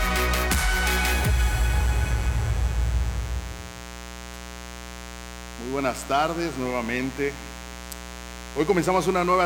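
Throughout the clip, mains buzz: sharp switching spikes from the 60 Hz supply are leaking into the signal path twice per cycle, spreading harmonics into the kilohertz range. The result is a steady, raspy buzz sitting roughly 15 dB below the audio.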